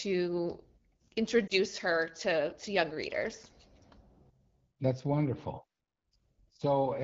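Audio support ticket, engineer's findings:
Lost AMR speech frames, 1.47–1.53 s, just before "her to to young". Brief dip or warble. On the waveform, a short envelope sag. On the spectrogram, smeared, flattened harmonics. The decoder concealed a failed frame by repeating earlier pitch and vocal-tract settings at reduced gain. The duration points to one 20 ms frame, on an AMR-WB 12.65 kbit/s path.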